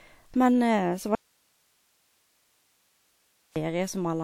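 The signal feed was likely interrupted while the path after the break stayed live, giving an audio dropout to a faint residue: from 1.15 to 3.56 s the speech cuts out abruptly for about 2.4 s, leaving only hiss roughly 45 dB below the speech level.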